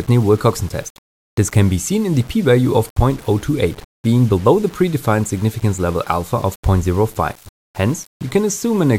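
Grainy distortion runs from start to end. It points to low bit depth without dither, likely six-bit rounding. The noise sits about 25 dB below the signal and tracks it.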